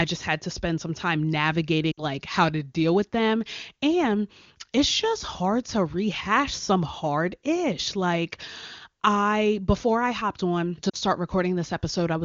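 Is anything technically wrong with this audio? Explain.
Yes. Lost AMR speech frames occur from 1.92 to 2.03 s and from 10.90 to 10.96 s. Radio errors made frames fail their checksum, so the AMR-WB decoder, whose clean, wideband sound points to a high bitrate, repeated the last good pitch and vocal tract settings with falling gain. The sound drops to near silence for about 60 ms, which fits three 20 ms frames, and then for about 40 ms, which fits two. Each time the voice comes back weak or rough for a moment.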